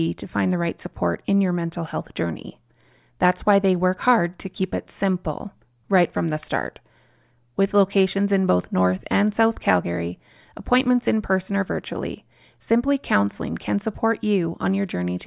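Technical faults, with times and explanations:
No technical faults detected.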